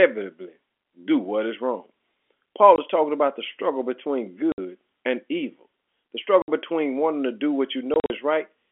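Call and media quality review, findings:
Packet loss filled with silence: dropouts at 2.76–2.78, 4.52–4.58, 6.42–6.48 and 7.94–8.10 s (scattered); silent waveform gaps, blank vertical spectrogram stripes, hard edges; hole lengths fit 20 ms packets, lost packets.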